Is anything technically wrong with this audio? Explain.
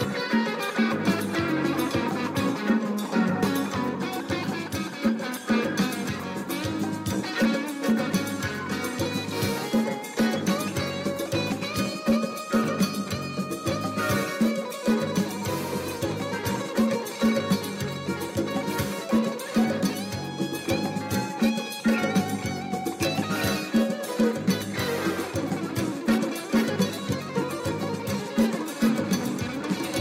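No, nothing technically wrong.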